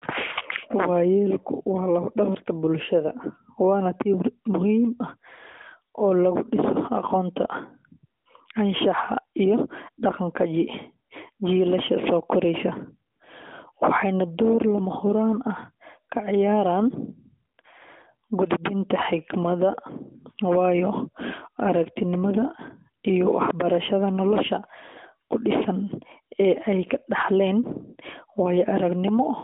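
At 8.20 to 8.26 s, 13.12 to 13.20 s, 17.56 to 17.58 s and 17.62 to 17.64 s you get AMR comfort noise. The phone decided nobody was talking, stopped sending speech frames for 60, 80, 20 and 20 ms respectively, and the far end patched each gap with generated hiss. The real background drops out and a smooth, even noise briefly takes its place, so you hear tiny texture switches, with the pair at 17.6 s flickering back to back, all over the light narrowband coloring of a 200 to 3600 Hz line.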